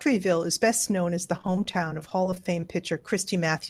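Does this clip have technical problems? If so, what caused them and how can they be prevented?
Yes. Repeated packet loss (robotic sound) from 1.37 to 3.02 s: 22 short dropouts, none longer than 20 ms, are filled by stretching the preceding sound, leaving the speech choppy with pieces missing. A steadier network connection, a larger jitter buffer or forward error correction would prevent it.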